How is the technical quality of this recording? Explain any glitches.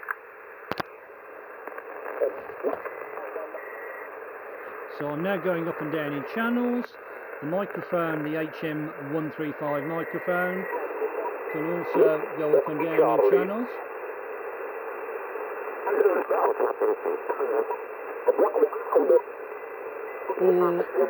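The recording has one technical fault, and it runs through the whole clip. That fault is crude rate conversion. The sound appears to have been raised in sample rate by a ratio of 1.5, which fits a change from 32 kHz to 48 kHz. It was done by repeating the nearest samples, with no filtering. The repeats fall in a fixed pattern. They create shifted, inharmonic copies of the sound, roughly 30 dB below it. These are heard as a gritty, inharmonic fizz that tracks loud and high sounds.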